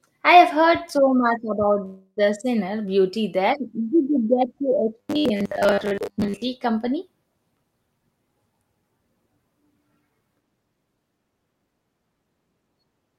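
At 1.85 s, packets were likely held up in transit and the jitter buffer ran dry, producing a call audio freeze: the last sound is stretched into a fading buzz for about 0.3 s, then briefly drops to silence before the speech resumes at 2.27 s, delayed but with nothing lost.

From 5.00 to 6.42 s, new audio likely arrived too rarely, so the receiver kept replaying a short buffer of about 10 ms, giving robotic sound from repeated short buffers. Most of this stretch is repeats, which impose a rigid, metallic 100 Hz buzz that only loosely tracks the speech.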